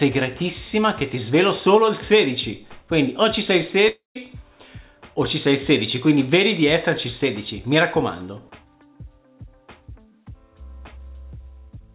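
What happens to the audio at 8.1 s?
At 8.1 s the audio is intact, with the call path's narrowband sound of nothing above 4 kHz running through unchanged.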